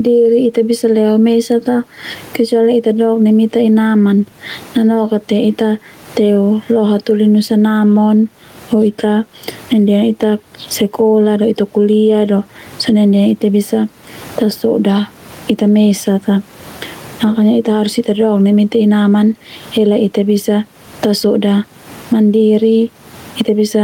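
Gain pumping runs through the whole speech clip. The swing is around 20 dB. Room noise sits about 41 dB below the speech. The likely cause is input gain set far too high, with a fast limiter or compressor pulling it down on each loud sound. Loud and soft passages end up close in level. The result sounds squashed.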